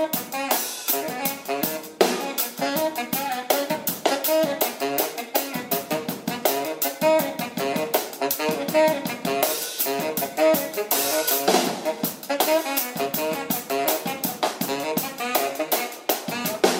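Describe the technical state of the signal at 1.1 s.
The signal is intact at 1.1 s, with no audible dropout, distortion, glitch or other fault at that moment.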